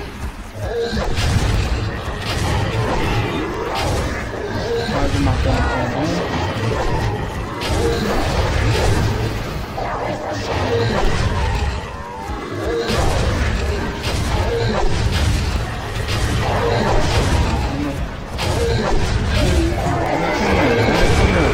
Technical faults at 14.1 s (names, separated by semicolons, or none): periodic USB or driver dropouts